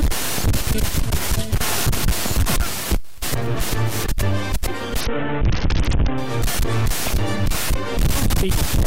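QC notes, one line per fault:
5.01–6.18 s, Bluetooth SBC bit pool drop. For just over a second the treble goes dull and a gritty, grainy noise rises under the sound. The link was congested, so the encoder cut its bit budget. The top sub-bands got few or no bits. What remained was quantised coarsely, and that roughness is the grit. The depth of the loss fits a bit pool falling from 28 to about 6, near 60 kbps. Full bandwidth returns at 6.18 s.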